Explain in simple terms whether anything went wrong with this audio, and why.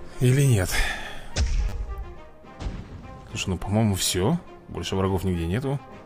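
A repeated buffer happens between 1.69 and 1.72 seconds. The playback device needed fresh audio at that moment, but it didn't arrive in time, so the device played the tiny piece it already had three more times in a row. Each piece is very short, which fits a 10 ms buffer, so the repeats blur into a quick buzz or click with hard joins. Around 30 ms of the real sound is lost.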